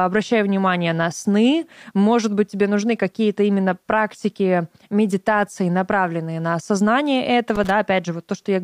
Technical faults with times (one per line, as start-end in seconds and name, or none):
7.55-7.70 loose connector crackle